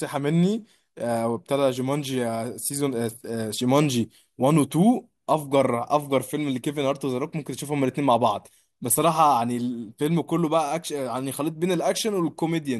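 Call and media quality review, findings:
Nothing stood out on listening to the speech in this clip.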